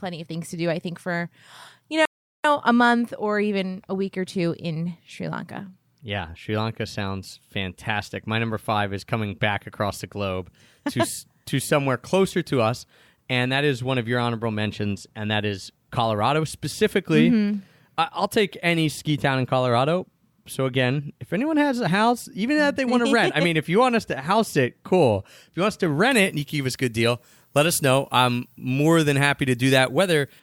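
At 2.05 s the speech hits a rebuffering stall: playback ran dry and sat silent for about 0.39 s, then picked up exactly where it stopped, nothing lost. From 26.11 s to 30.40 s there's pre-emphasis left on. It looks like a 75 µs FM boost that never got its matching cut, so the top end sits about 14 dB hot at 10 kHz and everything turns thin, bright and hissy.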